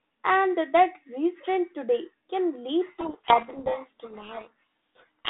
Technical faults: codec payload misread

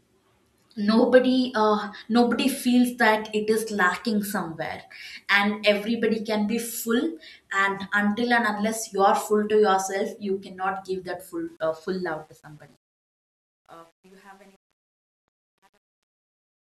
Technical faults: truncation distortion on a fade

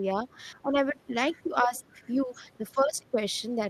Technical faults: speech suppressed in double talk; other side's voice leaking through

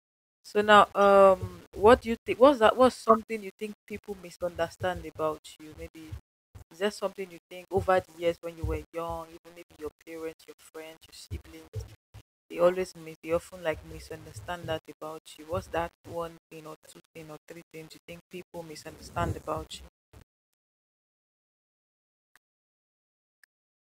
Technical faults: low bit depth without dither

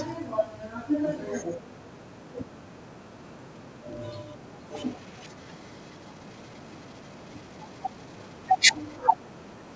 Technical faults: echo leak

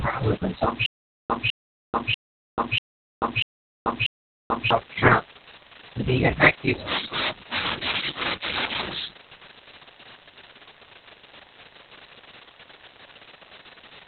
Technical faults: Opus voice compression; stutter with silent gaps

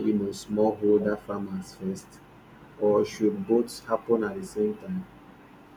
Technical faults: speech suppressed in double talk

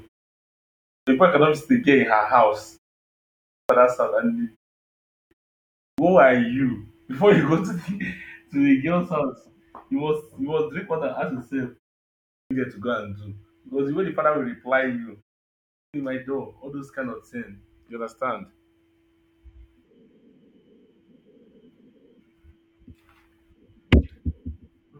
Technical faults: clipped start after a pause

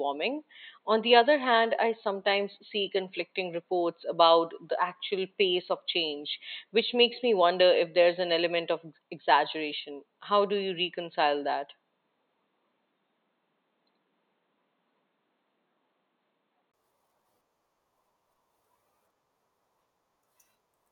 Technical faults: input switched to a poorer device

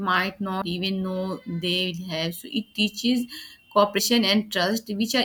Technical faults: compressed frames skipped

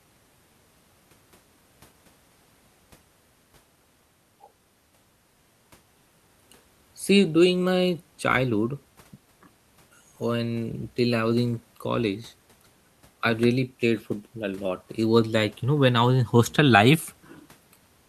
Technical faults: none

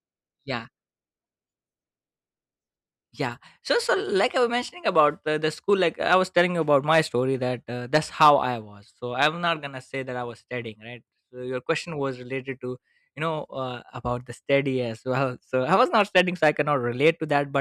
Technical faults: hard clipping

